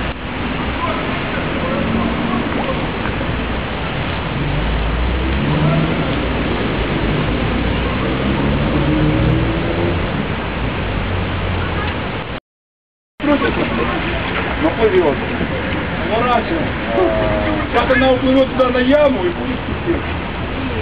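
Hard clipping shows up seven times: 8.89 to 9.33 s, 13.30 to 13.33 s, at 13.83 s, 14.66 to 15.09 s, 16.33 to 16.38 s, 16.98 to 17.04 s, and 17.77 to 19.07 s. The peaks push only about 0 to 2 dB past the converter's limit, so their tops get sliced flat and you hear brief crackly grit on the loudest moments.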